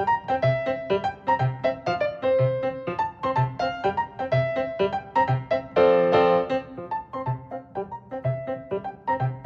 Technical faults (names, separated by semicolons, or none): none